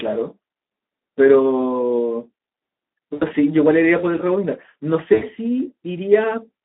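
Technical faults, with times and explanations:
Throughout: Speex codec. The speech is carried at a low bitrate, about 11 kbps, which leaves the CELP coder few bits to model the excitation, so the voice comes across hoarse and noisy. The damage is plainly audible. The band is confined to roughly 200 Hz to 3.7 kHz, typical of a narrowband telephone line, so sibilants and upper harmonics are missing and the sound is thin and boxy.
3.14–3.25 s and 5.13–5.28 s: VoIP packet loss concealed by the speech codec. In each gap about 80 ms of audio went missing, which fits four lost frames. The decoder filled it by repeating its last pitch period and spectral envelope at falling gain, so the speech is stretched into a buzzy tone or coloured noise that fades. Because the decoder's state rebuilds frame by frame, the voice stays weak and distorted for a short stretch after each gap.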